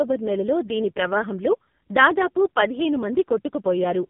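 From start to finish the speech sounds buzzy, thin and synthetic, with a muffled top end where nothing above about 3.8 kHz survives. This is the AMR narrowband mobile codec at work, heavily damaged at a low rate that fits 5.15 kbps. It rebuilds the voice from a vocal-tract model excited by a handful of pulses per short subframe. At so few bits the pulses are too sparse, and the result is that mechanical, reedy quality.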